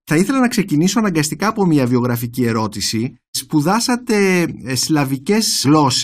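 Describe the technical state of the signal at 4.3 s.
At 4.3 s the speech signal is intact, with no technical fault present at that moment.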